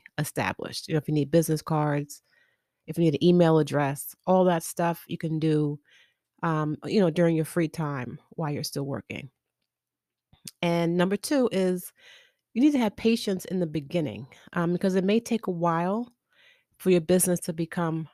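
No technical faults are audible anywhere in this speech recording.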